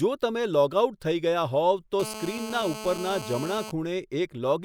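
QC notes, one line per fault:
2.00–3.71 s, GSM phone buzz. A hard, raspy buzz sits under the speech for about 1.7 seconds. Its fundamental is near 217 Hz, with a dense stack of harmonics above it. It holds steady, which fits a 2G handset on a live call nearby. The handset transmits in bursts 217 times a second. The audio circuitry rectifies those radio pulses into sound. The buzz ignores the speech and runs about 11 dB below it.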